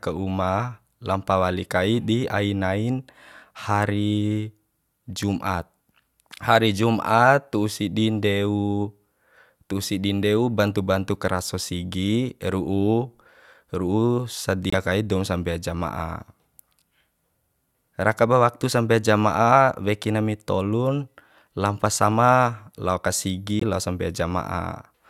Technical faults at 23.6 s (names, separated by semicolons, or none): Bluetooth stall